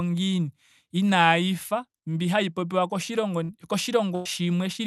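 At 3.43 to 3.51 s, just after "mbi hayi popiwa koshilongo", and again at 4.15 to 4.27 s, a burst of packet loss makes the speech stretch into a fading, held sound before jumping ahead, with about 60 ms and then 100 ms skipped. Unlike a plain dropout, there is no silence. The gap is filled by the concealed tail of the preceding sound. This happens over a call path whose top end stops near 12 kHz, which fits Opus.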